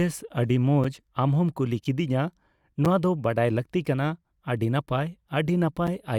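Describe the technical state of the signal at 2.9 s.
A gap between chunks occurs at 2.85 s: about 6.5 ms of silence at a join in audio delivered in 1.0 s chunks, heard as a brief hole.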